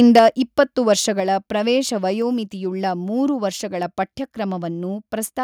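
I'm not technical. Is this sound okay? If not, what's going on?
No. Microphone overload from 0.0 to 0.19 s: the speech is too loud for the input, so its loudest peaks are flattened, giving a harsh, crackly edge, likely from the microphone level being set too high. Microphone volume stepped down at 0.19 s and again at 1.2 s: the voice and background both suddenly drop quieter, likely because the call software turned the microphone down after hearing it distort.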